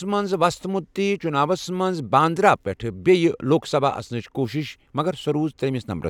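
No technical faults can be heard in the recording at any point; the speech signal stays intact and continuous throughout.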